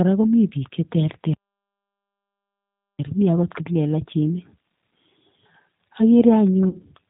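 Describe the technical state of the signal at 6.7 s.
Right at 6.7 s you're inside a VoIP packet loss concealed by the speech codec, running from about 6.69 to 6.80 s, just before "kiit ne". Roughly 40 ms of audio never arrived, which fits two dropped packets. The decoder fills the gap by carrying forward its last pitch and vocal-tract settings while turning the level down. You hear a short buzzy or noisy smear that sags, and it takes a moment after the gap for the sound to firm up again.

Under all of that sits the G.729 codec, audible across the whole clip and plainly so here. The sound is band-limited with nothing above 4 kHz, which is consistent with 8 kbit/s G.729A. Each 10 ms frame is rebuilt from a filter, a pitch predictor and a few pulses, so the speech comes out thin, a bit gritty and synthetic. That coding also shapes what the concealment is working from.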